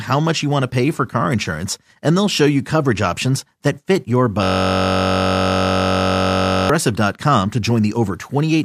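After "options that fit your", from 4.43 to 6.70 s, a system hang loop repeats one 21.33 ms slice as a steady 46.9 Hz buzz, not a dropout's silence.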